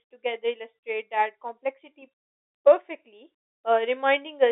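Nothing stood out on listening to this speech, which comes through the narrow telephone band of G.711 coding with nothing audible above about 3.8 kHz.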